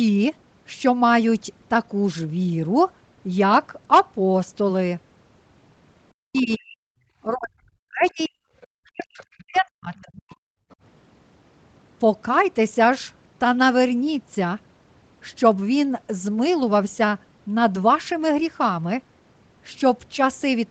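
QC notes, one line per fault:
6.17–10.37 s, speech suppressed in double talk. The talker's level sags and breaks up in patches while a second voice is active, about three seconds in total. At its deepest the voice falls by about 40 dB and nearly vanishes. This is likely the echo canceller failing to tell the near talker from loudspeaker echo during overlap, so it pulls both down together. The result is a choppy, hollowed-out stretch.
6.35–10.75 s, other side's voice leaking through. Faint scraps of another voice surface at 6.35–6.57 s, 8.08–8.67 s, 9.21–9.37 s, 9.94–10.00 s and 10.70–10.75 s. They sit between about 25 and 40 dB below the main speech. The longest, at 8.08 s, lasts over half a second. The others are brief fragments. The likely cause is loudspeaker playback reaching the microphone and surviving echo cancellation.
10.65–10.69 s, background gated by the echo canceller. The room sound ducks abruptly for about 40 ms. 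It falls by about 28 dB, then comes straight back. It lands just before a leaked fragment at 10.70 s. The canceller clamped the microphone hard while it judged the loudspeaker to be active. This makes the ambience blink out rather than fade. The short duration makes it read as a brief hole in the background.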